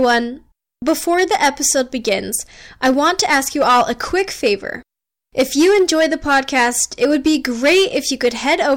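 Hard clipping runs through the whole speech clip. The signal is driven about 10 dB past the limit, so a few percent of peaks are cut flat. Loud syllables turn harsh and fuzzy.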